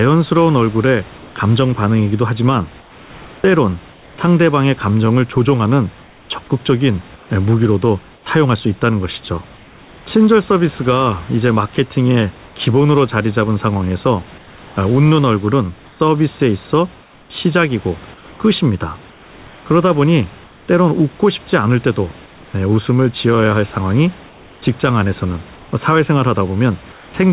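Comfort noise in place of the background appears in the pauses at 1.18–1.36, 2.8–4.18, 6.04–8.26, 9.56–10.06, 12.46–12.56, 14.38–20.68, 22.26–22.54 and 24.28–27.14 s. Each time the speech stops, the room's own background gives way to a flat, featureless hiss, sometimes about 1 to 3 dB quieter, until speech resumes. This is likely discontinuous transmission, with the receiver filling the silence with synthetic noise. The call sound is narrowband, with nothing above 4 kHz.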